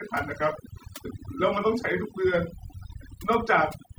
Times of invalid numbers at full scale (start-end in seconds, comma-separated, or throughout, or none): none